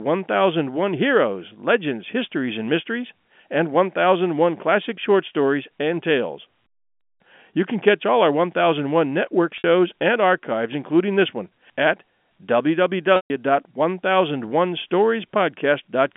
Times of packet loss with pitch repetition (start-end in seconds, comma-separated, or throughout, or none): 9.58-9.64, 13.16-13.30